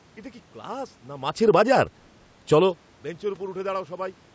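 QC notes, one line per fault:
1.33–1.7 s, automatic gain falling: the gain control judged the input too loud. It pulled the level down by about 7 dB, so speech and room noise sink together.
1.62–2.82 s, automatic gain rising: the input fell by about 24 dB. The control answered by raising gain about 7 dB over roughly a second, so speech and background swell together.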